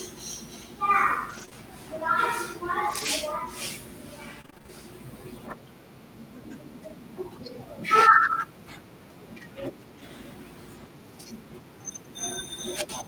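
Scattered short gaps run from 1.29 to 4.70 s. Across this stretch of speech, packets went missing one at a time, what sounds like around ten separate dropouts, each only a few tens of milliseconds at most and adding up to about 180 ms of lost audio. The receiver filled every hole by extending the sound just before it, so the speech stays clear but is marked by brief ticks, slight smears and small hiccups.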